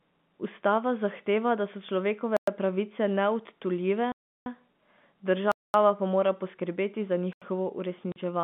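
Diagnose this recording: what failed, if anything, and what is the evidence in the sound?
Driver or buffer stage: blocks of digital silence with hard edges at 2.37–2.48 s (after "zahteva da so"), 4.12–4.46 s (after "pravice neodtujljive"), 5.52–5.74 s (before "pa mora poskrbeti za") and 7.33–7.42 s. The output buffer likely went unfilled, and the 341 ms and 85 ms holes fit 16384- and 4096-sample buffers at 48 kHz.

Network stage: packet loss filled with silence at 8.12–8.16 s, a 40 ms hole with abrupt edges, consistent with two lost 20 ms packets. The receiver played zeros in their place rather than concealing the loss.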